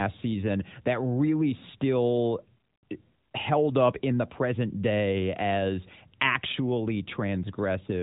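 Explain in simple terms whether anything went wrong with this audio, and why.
Nothing went wrong here, and there's really nothing in this speech to point to as a fault at any moment.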